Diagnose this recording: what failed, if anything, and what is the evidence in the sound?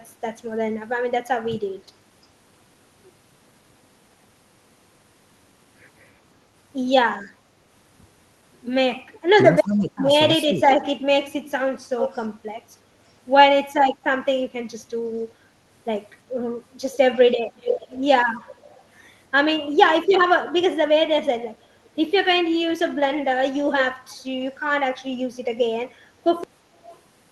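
Call processing: speech suppressed in double talk between 9.63 and 10.73 s. Across roughly 700 ms of that window the level dips in pieces, by about 15 dB at the deepest point. The likely cause is an echo canceller that couldn't tell the near talker from the loudspeaker echo during overlap, so it attenuated everything it received rather than only the echo.

Call processing: echo leak, heard as a delayed copy of the voice trailing it by 343 ms. Faint scraps appear at 9.68 s (about -30 dB), 21.84 s and 25.9 s (about -35 dB), and 26.75 to 27.0 s (about -25 dB). Loud stretches sit near -5 dB at 11.98 to 12.25 s and 16.92 to 18.84 s. This is likely a loudspeaker endpoint whose canceller left residual echo that was sent back up the call.

Buffer or storage: cut-off end at 26.44 s. The sound stops mid-utterance and drops to digital silence with no natural decay, which points to the final buffers never being written or flushed. 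The capture ends abruptly instead of closing cleanly. The band-limited Opus path, topping out near 12 kHz, adds its ordinary coding texture throughout.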